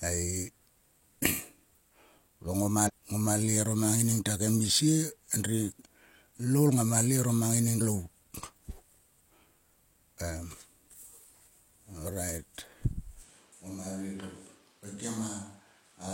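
At 2.84 s and again at 7.76 s the speech jumps forward: compressed frames skipped. Whole blocks of the encoded stream never reach the output. The first jump loses roughly ten frames, around 0.4 s of speech, and the second about twenty frames, some 0.7 s, which fits a frame length of 46.4 ms. Each join spans about 60 ms. On a spectrogram, harmonic contours break and restart out of line. On a waveform, the envelope shows a sudden discontinuity.

From 13.23 s to the end, the speech turns hollow and roomy, most likely a switch to a distant microphone after the close one dropped out. The level falls by about 5 dB, and room noise rises to about 30 dB below the speech. The low end thins noticeably. A spectrogram shows weaker low-frequency energy, reverberant tails blurring each syllable, and a lifted noise floor between words. On the waveform, the envelope steps down abruptly and stays lower through the final seconds.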